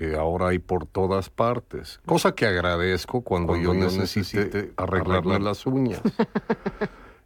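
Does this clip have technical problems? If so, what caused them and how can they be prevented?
Yes. From 3.44 to 5.44 s the speech has a doubled audio track. A second, full-band copy of the same speech trails the original by about a fifth of a second. It sits somewhat quieter than the original, with no decay or room colour. It appears and vanishes abruptly at those times. The likely cause is the signal being captured twice, once through a slower path. Route each source through a single capture path and mute any duplicate monitor or loopback feed.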